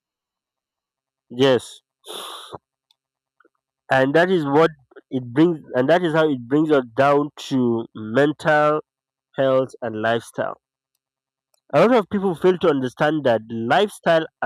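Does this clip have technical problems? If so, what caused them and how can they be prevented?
No, there are no technical problems to point to in this speech clip. Since nothing went wrong, there is no cause to trace and nothing that needs preventing.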